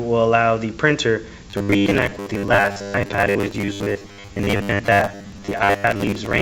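From 1.50 s to 6.41 s the audio turns into a rigid, metallic, robotic buzz at 100 Hz. This is robotic sound from repeated short buffers, likely caused by audio arriving too seldom and the last 10 ms being looped over most of that stretch. On a spectrogram it shows as evenly spaced horizontal harmonics every 100 Hz; on the waveform it shows as identical 10 ms cycles repeating. The call path leaves nothing above 8 kHz, which fits a G.722 wideband codec.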